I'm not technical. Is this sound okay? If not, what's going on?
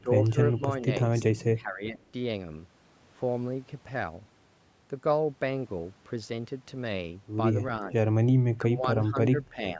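No. The speech briefly sinks and thins out at 0.02–0.09, 0.28–0.36, 0.58–0.63, 1.54–2.01, 8.57–8.88 and 9.1–9.79 seconds. This is likely speech suppressed in double talk: the call's echo control turns the voice down while someone else talks. Unlike a connection dropout, the voice gets quieter rather than vanishing outright.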